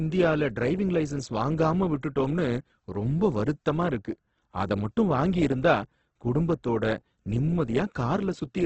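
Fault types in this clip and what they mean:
Opus compression: The speech sounds grainy and rough throughout, with a noisy, hashy texture where clean tone should be, and nothing above about 8.2 kHz. The likely cause is Opus coding at a very low rate, around 12 kbps, in its music-oriented mode. It preserves each band's energy but, short of bits, fills bands with folded copies or noise instead of leaving holes. That trades swirling for grit, and the damage here is heavy.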